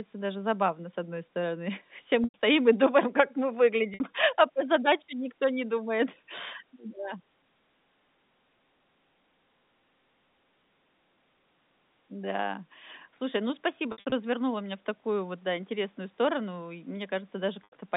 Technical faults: packet loss with pitch repetition

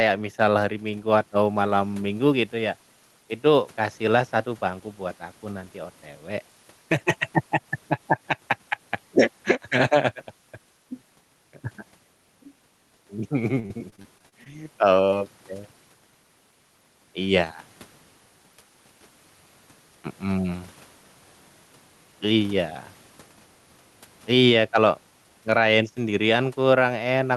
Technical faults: gain pumping; repeated packet loss (robotic sound); short concealed packet loss

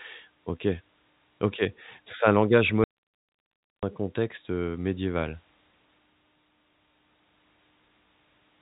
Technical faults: audio dropout to a faint residue

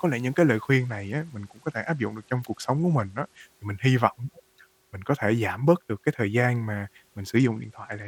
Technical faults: Bluetooth SBC bit pool drop

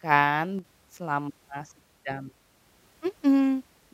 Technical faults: one channel drops out

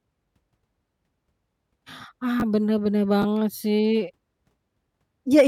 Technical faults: chunks out of order

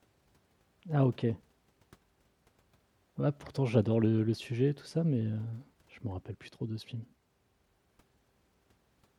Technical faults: none

